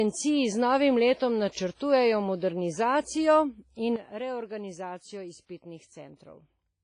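Throughout the speech there is heavy ringing, washy smearing and hiss that breathes with the signal, with nothing above 10.5 kHz, likely WMA compression at a low bitrate around 24 kbps. At 3.96 s the speech and background noise drop together by about 10 dB and stay down to the end, a sudden gain jump likely caused by a digital gain change applied without a ramp. From 5.46 to 5.49 s a short hiss runs ahead of an attack and softens it. This is pre-echo, where codec noise spreads about 34 ms into the quiet moment before the onset.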